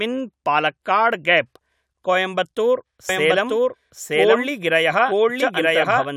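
From 3.09 s to the end, a doubled audio track appears: a second full-band copy of the speech arrives roughly a second late at about equal loudness, likely from a slower capture path. It starts abruptly and never decays or takes on room colour, which separates it from echo.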